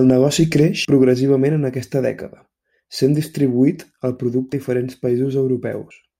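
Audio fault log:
0.85 s, 4.53 s and 5.90 s: compressed frames skipped. Whole frames were lost or rejected, so the speech jumps ahead about 150, 150 and 70 ms, fitting 32 ms frames.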